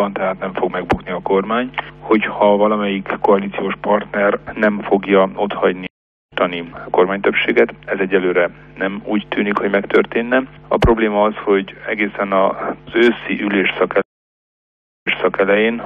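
At 5.87 s a stream reconnect drops the sound for 0.45 s, then resumes roughly 0.4 s further on. At 14.02 s another leaves 1.04 s of silence and restarts 0.39 s earlier, repeating material. Unlike a plain dropout, the timeline jumps as a fresh decoder takes over.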